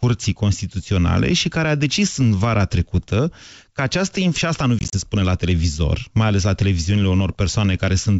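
A speech clip carried over a G.722 wideband call at what sounds like 64 kbit/s, with its light upper-band hiss. Packet loss on the ADPCM call breaks up the speech from 4.79 to 4.94 s. About 80 ms goes missing across that 140 ms stretch, in hard-edged silent gaps no longer than 30 ms. That points to around seven lost packets. Each gap throws the decoder's predictor and step size out of step with the sender. The speech returns slightly distorted before it settles.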